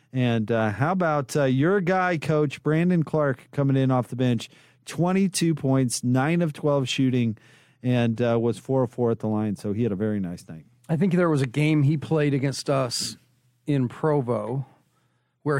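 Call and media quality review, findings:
No faults found in the speech recording. Nothing here calls for a ticket.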